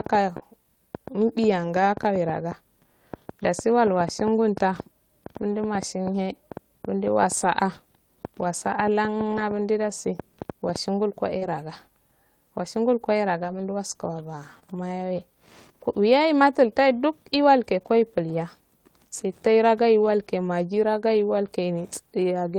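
Speech, hit twice by network packet loss. A short concealed packet loss at 0.37–0.42 s and again at 14.59–14.63 s left about 20 ms that never reached the decoder, so the receiver extended the preceding sound and blended back, heard as a brief smear or wobble. Separately, a lost packet was rebuilt from error correction at 0.42–0.44 s and 14.55–14.57 s: the next packet's low-bitrate copy filled each 20 ms, leaving no gap but a rougher, noisier instant.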